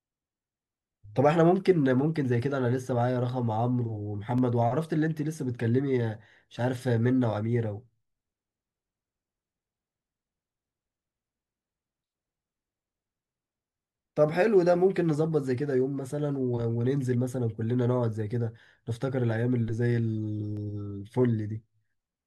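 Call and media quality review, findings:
Block of digital silence at 4.38 s and 20.57 s: output buffer likely not filled in time, about 2 ms zeroed, speech cut abruptly, audible as a tick or dip each time.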